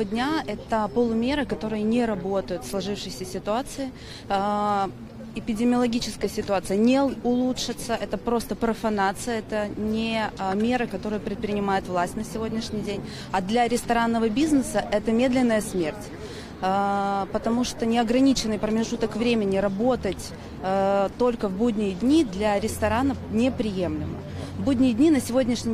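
No technical faults can be heard anywhere in the audio, and the signal continues without interruption throughout.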